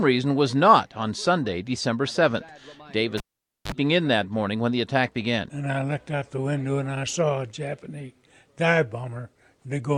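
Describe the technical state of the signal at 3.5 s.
At 3.5 s the signal sits inside a cable pulled and plugged in event spanning 3.18 to 3.72 s. A pop opens a gap of about 0.49 s where the live lead is out and the line falls to near silence. As the plug goes back, only the tip makes contact for about 41 ms, letting in a 50 Hz mains buzz before a second pop restores the audio. That buzz and the paired pops set it apart from a plain digital dropout.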